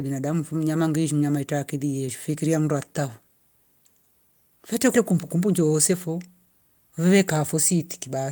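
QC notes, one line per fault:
Throughout: clock drift between sender and receiver. The sender's clock runs roughly 5 percent fast, so the jitter buffer keeps overfilling and the receiver must discard audio to keep up. Unlike packet loss, nothing goes silent. The unevenness comes from steady trimming, not gaps.
0.02 to 8.16 s: repeated timing corrections. Short pieces are cut at uneven intervals, all in the same direction, giving a net pace of about 104 percent. This differs from the smooth, uniform speed-up of a resampled clip.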